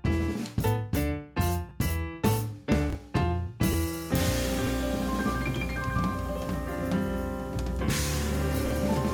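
At 1.69 to 1.71 s, lost LE Audio frames leave a 20 ms gap, which fits two 10 ms LC3 frames. The decoder repeats the last spectrum with randomised signs. Tones blur briefly into a noisy smear.

At 2.90 to 2.95 s, chunks out of order appear. One chunk of about 23 ms plays one slot late. Nothing is missing, but the sequence is wrong. There are three hard joins, and the moment sounds jumbled.

At 3.72 to 3.74 s, the same 20 ms frame loss returns with the same brief noisy smear.

At 4.62 to 4.69 s, a chunk arrives two slots late, making a slightly longer garbled stretch. At 8.66 to 8.71 s, one more chunk plays a single slot late.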